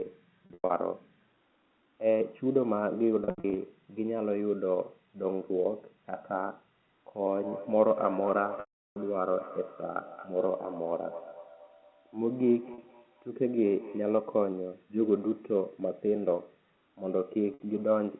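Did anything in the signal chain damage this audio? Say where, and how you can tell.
Yes. Packet loss with pitch repetition at the network stage hits 0.46–0.70 s, 3.24–3.56 s, 8.60–8.96 s, 12.74–12.78 s and 17.54–17.60 s. The receiver loops the last pitch cycle, so short gaps buzz and the 360 ms one at 8.6 s fades out. Spectrograms show frozen harmonics, and waveforms show identical repeated cycles.

A feedback echo between two devices runs from 7.3 to 14.35 s. A second device in the room replays the call into a microphone whose echo canceller can't remove it. Each word returns roughly every fifth of a second, thinner each pass, peaking about 14 dB under the speech. Spectrograms show evenly spaced, fading syllable copies.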